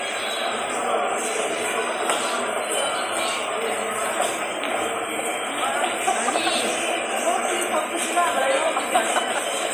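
No technical faults can be heard anywhere in this recording of sound. Nothing in it calls for a timestamp or further comment.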